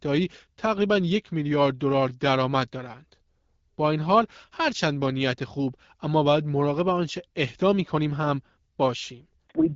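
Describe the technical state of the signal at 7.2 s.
At 7.2 s the speech is intact, with no fault to be heard, carried through the AMR wideband (HD Voice) codec at 12.65 kbit/s with its usual band limit below about 7.6 kHz.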